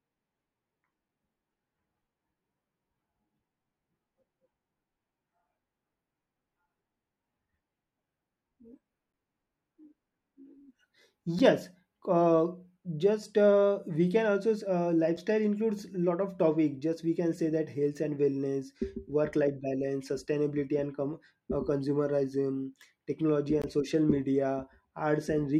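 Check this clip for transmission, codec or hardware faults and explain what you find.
Four blocks of digital silence break up the speech. Each time, the output buffer was likely not filled in time, so a run of samples dropped to zero with no fade. At 9.13 s (10 ms), 11.39 s (about 6.5 ms) and 15.17 s (about 5.5 ms, just before "includes a lot of") the gap is heard as a tick, and from 23.62 to 23.64 s the 20 ms gap sounds like a short hole.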